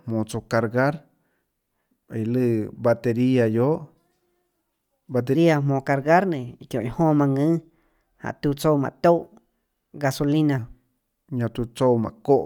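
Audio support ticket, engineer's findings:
Voice turns high and hurried from 5.35 s to 10.58 s, then snaps back. Section at the wrong speed: 1.16x, pitch up about three semitones. Likely a clock or sample-rate mismatch on that segment, so speed and pitch shift together.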